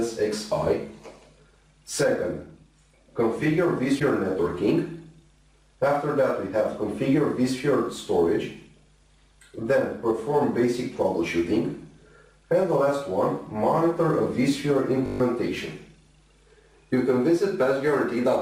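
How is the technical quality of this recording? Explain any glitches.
The recording has two distinct glitches.

At 3.99 to 4.02 s the sound briefly garbles and skips ahead. The likely cause is a broken MP3 bit reservoir. Frames were lost, so the next frame reached back for borrowed data and decoded foreign bytes. The length fits a single 26.1 ms MP3 frame.

At 15.06 to 15.2 s a steady 50 Hz buzz replaces the audio. This is a system hang loop. The machine stalled while the sound hardware kept replaying one 20 ms buffer seven times, and about 150 ms of real audio went missing.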